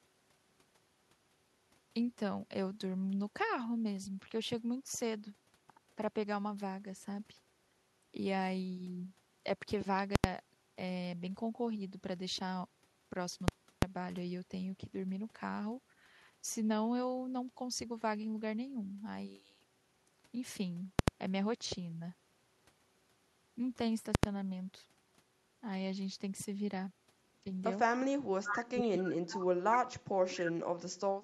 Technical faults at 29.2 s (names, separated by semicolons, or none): speech suppressed in double talk